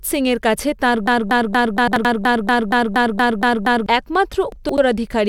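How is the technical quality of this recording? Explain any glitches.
The recording has two clear technical faults: a long broken-record loop and two spots where chunks play out of order.

From 1.08 s to 3.86 s there is a broken-record loop. A 235 ms piece of speech repeats exactly, back to back, 12 times, and whatever should have been heard in those almost three seconds is gone. The likely cause is a stall in the player or stream that kept resending the last fragment it held. On a spectrogram this appears as an identical block of harmonics tiled at a 235 ms spacing. The waveform shows the same envelope copied over and over.

The chunks-out-of-order fault first occurs just after "সিংয়ের কাছে", from 1.88 s to 2.05 s, where an 85 ms chunk is heard one position later than it should be. The second occurrence runs from 4.52 s to 4.78 s, where an 85 ms chunk comes two positions late. No audio is lost in either case, but the sequence is scrambled, so each moment sounds jumbled. 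On the waveform and spectrogram, three hard vertical discontinuities mark the joins, and the pitch and formant tracks jump back and forth across them.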